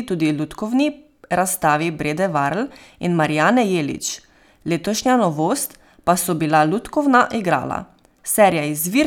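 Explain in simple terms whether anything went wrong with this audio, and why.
Nothing went wrong; no technical faults are audible here.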